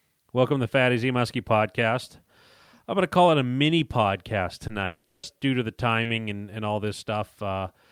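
From 4.67 to 5.43 s the speech turns choppy and robotic. This is repeated packet loss: four gaps, the longest 180 ms, were each patched by extending the previous sound, covering half the stretch.

At 6.03 to 6.07 s a brief smear marks short concealed packet loss, where 20 ms of missing audio was bridged by continuing the preceding sound.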